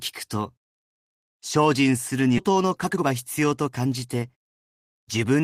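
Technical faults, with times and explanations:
2.37–2.39 s, skip ahead: speech jumps abruptly forward with no gap, losing about 0.7 s, as audio was dropped while later audio was waiting, and both sides spliced together.
2.49–5.41 s, jitter buffer speed-up: speech sounds hurried at unchanged pitch, running 111% speed as short pitch-period pieces were repeatedly cut, removing about 0.3 s of buffered delay.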